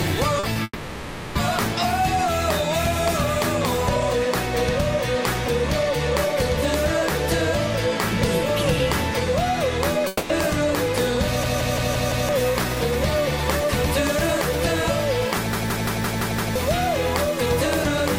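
Two brief smears open the clip, at 0.39 s and 0.53 s, where the sound wobbles for about 40 ms and then 20 ms before settling. These are short concealed packet losses: audio arrived too late, and the receiver extended the preceding sound to bridge each gap before blending back.

From 0.63 s to 1.37 s the sound stretches into a fading buzz or hiss lasting about 720 ms, ending in roughly 30 ms of silence before the audio resumes further on. A shorter version follows from 10.07 s to 10.31 s, a 220 ms smeared tail with no silent stretch. Both are likely long network dropouts: nothing reached the receiver, so it carried the last sound forward while that section was lost.

From 11.44 s to 12.29 s the audio stutters like a machine gun, one 171 ms fragment repeating five times at about 5.9 Hz. The same happens from 15.53 s to 16.56 s, this time with six repeats. Each is a system hang loop: the computer froze while the sound hardware kept replaying the same ring buffer, whose length fits an 8192-sample buffer. 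About a second of audio is lost each time.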